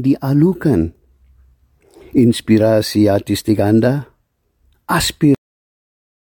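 A cut-off end at 5.35 s: the sound stops mid-event and drops straight to digital silence with no decay, unlike a fade-out, because the final buffers never played.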